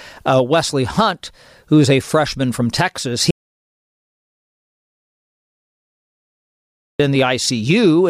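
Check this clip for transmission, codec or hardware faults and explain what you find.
One fault is present. From 3.31 to 7.00 s, an audio dropout to silence removes about 3.7 s of speech. The input was likely lost while the recorder kept writing silence, leaving dead silence with no room tone.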